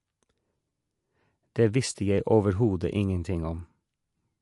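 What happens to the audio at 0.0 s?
At 0.0 s the speech is already carrying MP3 compression damage, and it runs the whole clip. Nothing gets through above 11.3 kHz, so the top end sounds dull. Weak frequency components flicker in and out between frames, giving the speech a watery, swirly texture and a chirpy edge on the s sounds. That's most likely an MP3 encoder starved for bits, and the damage level fits something around 50 kbps.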